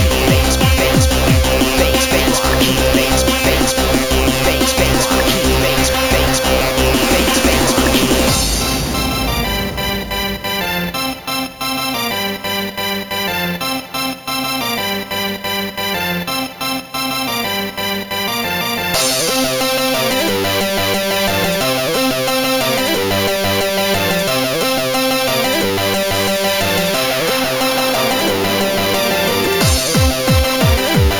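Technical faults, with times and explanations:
Throughout, imaging from sample-and-hold upsampling: each sample was repeated unfiltered, which fits a 16 kHz source raised to 48 kHz. A mirrored spectrum copy from 8 to 16 kHz, about 13 dB down, adds a metallic fizz that follows the sound's level and moves against its pitch.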